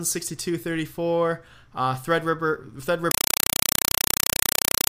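A compressed stream played as audio: from 3.11 s to the end, an undecoded AC-3 bitstream, likely 192 kbps, is output as samples, giving loud chattering static in 4 ms bursts 31.25 times a second.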